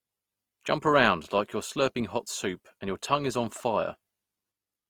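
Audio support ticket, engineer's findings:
Speech grainy, rough and noisy throughout, with no band dropouts. Likely Opus compression in music mode at about 24 kbps, with starved bands noise-filled instead of left empty.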